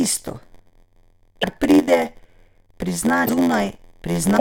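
A steady buzz at 86.1 Hz runs under the speech from start to finish, and the delivery drags at 0.938 times normal speed with the pitch about unchanged. This is a padded block size mismatch: each block comes up short and is topped up with silence, which fits a 512-sample read block.

Brief glitches land at 1.41 to 1.44 s, 3.25 to 3.29 s and 4.36 to 4.41 s, right at the end. Each is a short chirp, noise burst or hole, with the sound jumping ahead. The likely cause is a broken MP3 bit reservoir: after lost frames of about 26 ms, the next frames fetch borrowed data that isn't theirs.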